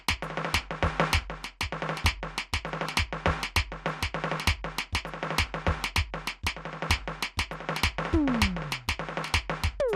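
A music clip with two kinds of trouble. Throughout, the music sounds dull and plainly gurgling. The top end is thin and keeps flickering, as if upper bands drop in and out. What remains has a grainy, coarse texture. This points to MP2 compression, likely at a low rate around 80 kbps. At that rate the encoder cannot give all 32 sub-bands enough bits. Upper bands get switched off, and the rest are quantised roughly. On top of this come two bursts of DAB burbling. The first runs from 3.60 to 3.74 s, the second from 7.98 to 8.08 s. Each adds short blips of noise over the music. Both fit weak reception, where a small share of bit errors slips past error correction. Corrupted samples then put short noise blips into single sub-bands, and corrupted scale factors make sub-bands jump in level for up to a frame.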